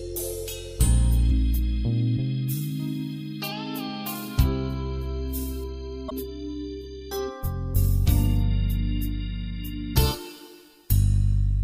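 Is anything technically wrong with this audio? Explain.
Yes. At 1.27–1.31 s and 6.08–6.12 s, damaged data in a compressed stream makes the decoder misread frames, giving brief glitches that appear as short disruptions on a spectrogram.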